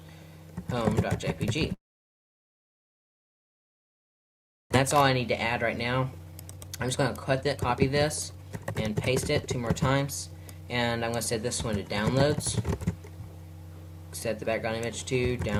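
From 1.73 to 4.76 s, a long network dropout likely cut off incoming audio. After a brief fading continuation, about 2.9 s of near-silence follows, and roughly 1.6 s of material never returns. Jitter buffer speed-ups then drain the backlog by trimming pitch-period-sized pieces. From 5.91 to 7.78 s the sound runs at 134% speed, and from 8.28 to 10.92 s at 126%. Each stretch sheds roughly 0.7 s and sounds hurried at unchanged pitch.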